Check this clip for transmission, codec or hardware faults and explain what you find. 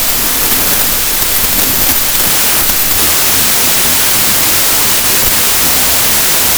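One fault runs through the whole clip: a wrong sample width.

From start to finish, loud harsh noise swamps the speech, which survives only as a buried trace, slowed to 0.75 times its proper speed with pitch dropped to match. The pattern fits 32-bit integer samples read back as packed 24-bit ones. Many groups of bytes straddle two true samples, so most values are scrambled and few keep the real signal's top bits. The extra samples stretch playback.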